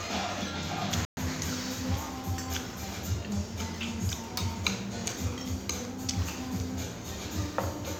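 At 1.05 s the audio cuts to silence for 120 ms, a playback stall, likely the player starving for data, then resumes at 1.17 s.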